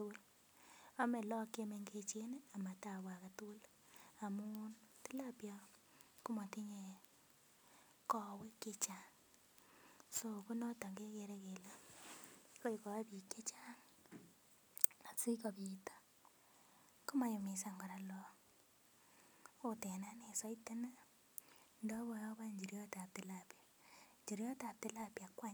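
From about 4.27 s to 10.91 s the speech picks up sample clock jitter. The converter's clock wobbles, so each sample lands a touch early or late, on the order of several microseconds. That timing slop turns into error wherever the waveform moves fast, so you hear a grainy hiss riding on the louder and brighter parts of the speech, sitting roughly 15 dB under the signal, and it drops away in the pauses.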